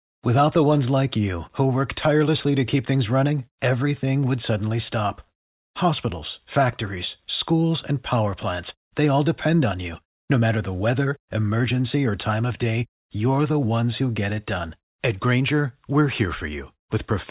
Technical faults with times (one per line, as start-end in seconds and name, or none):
none